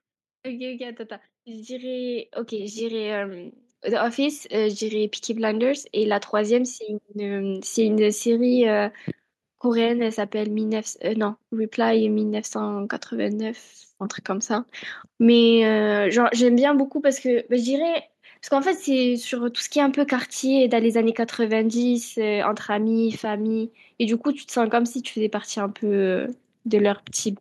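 From 0.78 s to 7.79 s the level climbs steadily as automatic gain rising takes hold: the gain control judged the speech too quiet and pushed its amplification up by about 15 dB over those seven seconds. Voice and background noise swell together, so the room tone grows as audibly as the speech. On a waveform the envelope widens like a ramp; a spectrogram brightens uniformly across all frequencies, noise floor included.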